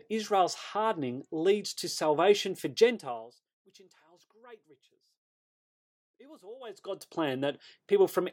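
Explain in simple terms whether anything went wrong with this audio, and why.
Nothing went wrong here; it's just someone talking, with no glitches, dropouts or odd noises anywhere along the way.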